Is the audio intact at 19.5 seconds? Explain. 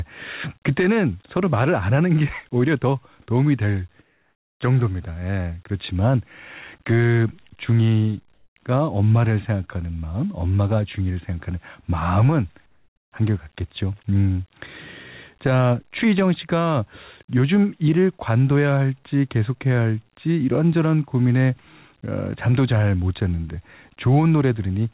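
Yes, the speech at 19.5 seconds is intact, coming through the call path's narrowband coding, with nothing above 4 kHz, and no dropout or glitch.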